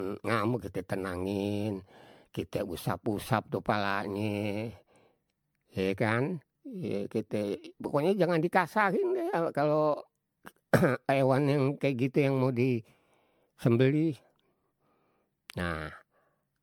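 From start to finish the speech carries generation loss: a swirly, watery smear across the voice, a hollow quality, and consonant attacks that have gone soft and blurry. That's more damage than a single MP3 pass at roughly 103 kbit/s would cause, so the likely cause is the audio being decoded and re-encoded around ten times. Each pass requantises on a shifted frame grid, so the noise and spectral holes pile up. Nothing survives above about 19.9 kHz.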